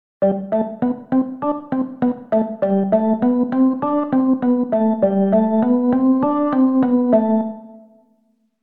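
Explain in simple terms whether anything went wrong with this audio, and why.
Nothing went wrong with this audio, because there is no fault anywhere in it to explain.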